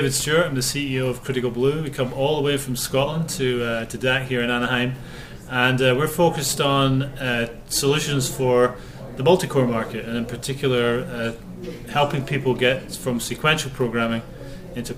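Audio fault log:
No fault found in the audio.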